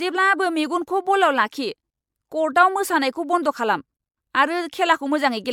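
Throughout the speech, generation loss is audible: swirly, smeared, hollow texture with blurred attacks. It likely comes from about five repeated MP3 passes at 128 kbit/s.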